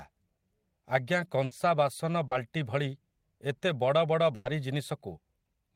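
A speech recording with three network dropouts. Two are bursts of packet loss, at 1.45 to 1.53 s and 4.35 to 4.47 s, where roughly 60 ms and then 100 ms of audio never arrived. The receiver stretched the last sound, fading it down across the gap, and playback then jumps ahead with that stretch of speech gone. The third is a short concealed packet loss at 2.27 to 2.33 s, about 40 ms long. The decoder extrapolated from the preceding audio and cross-faded back into the real signal, leaving a brief smear rather than an audible hole.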